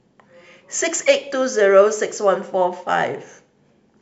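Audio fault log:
0.46–3.87 s, clock slip clicks: around ten faint ticks land roughly every 0.4 s through the speech, each a single-sample jump. The steady spacing points to two unsynced clocks drifting apart by something like 70 ppm, likely the cause here.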